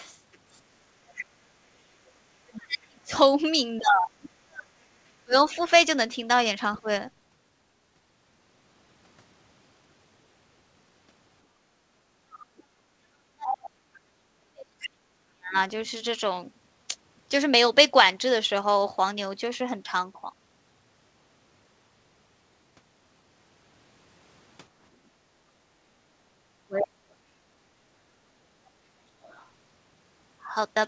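From the start to 3.26 s a second, fainter voice sits about 20 dB under the talker. This is the other side's voice leaking through, likely loudspeaker echo the canceller failed to remove. Unlike the talker, it rises and falls independently of them.

Between 1.64 and 6.88 s, the talker's own speech is suppressed in double talk, likely while both sides overlap. For roughly two seconds in total the level drops, by as much as about 40 dB at the deepest point. The echo leaks again from 5.52 to 6.8 s at about 30 dB down. The difference between the two faults is what each one changes: the leak adds an extra voice, while the suppression removes parts of the talker.

From 11.69 to 11.82 s the background is gated by the echo canceller. The room tone drops by about 11 dB for roughly 150 ms and then returns. Only the ambience falls away here, which tells it apart from double-talk suppression.

At 12.32 to 13.7 s the leaked voice comes through strongly, only about 10 dB below the talker. 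Double-talk suppression follows from 12.35 to 15.55 s, cutting the talker by up to about 40 dB over roughly three seconds. It happens again from 26.31 to 28.3 s, this time up to about 35 dB for around one second. A final, very faint scrap of echo, about 35 dB down, appears at 29.23 to 29.46 s.

Throughout the clip nothing is heard above 8 kHz, which is consistent with the G.722 call path at 64 kbps.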